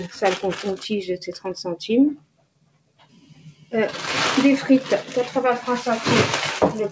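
A noise suppressor meant for speech stays active throughout, applied to music or sounds it misreads. It treats held tones and decaying tails as noise. Attacks pass, sustained parts sink. The level swings by roughly 15 dB, so the sound pumps and thins.

From 2.16 to 3.73 s, the noise suppressor cuts one sound harder than the rest, for about a second and a half in total. The deepest drop is about 21 dB. The sound dips away, over a call path with nothing above 8 kHz.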